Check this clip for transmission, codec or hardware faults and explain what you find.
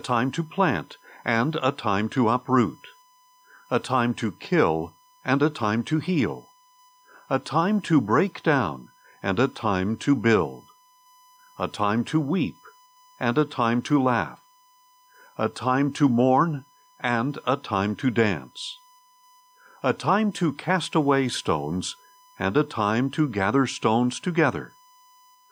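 A hardware fault is present: USB whine runs through the whole speech clip. The bus draws current in 1 ms frames, which leaks through power or ground as a steady 1 kHz tone roughly 35 dB below the speech. It shows as a flat horizontal line at 1 kHz on a spectrogram.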